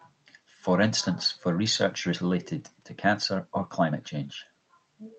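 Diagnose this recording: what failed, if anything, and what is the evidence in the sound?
Nothing failed: the speech comes through a working call path, and its content stops near 8 kHz, which fits Opus coding at around 32 kbps.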